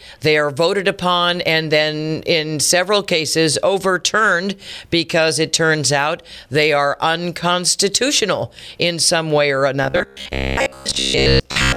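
From 9.84 to 11.77 s, stalled audio was likely padded by looping buffers near 15 ms, causing robotic sound: a rigid, metallic 66.8 Hz buzz.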